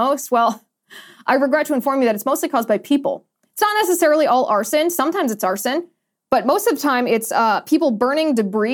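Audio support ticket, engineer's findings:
No audible faults found on review; no action needed.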